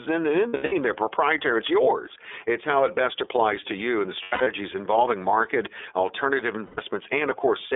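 The speech has passed through the iLBC codec throughout, and its damage is plainly audible. The line is cut to roughly 300 Hz–3.5 kHz, and each frame's excitation is coded on its own, leaving a rough, slightly synthetic edge that fits the 13.33 kbps, 30 ms mode.

Lost iLBC frames interrupt it at 0.48–0.73 s, 4.22–4.47 s and 6.65–6.79 s. At each, the decoder repeats the last pitch cycle with added noise, giving brief buzzy, held-vowel patches. The first two are scattered dropouts, the longest run under a tenth of a second at 0.48 s and near it at 4.22 s. The third loses about 120 ms. The voice recovers almost at once after each.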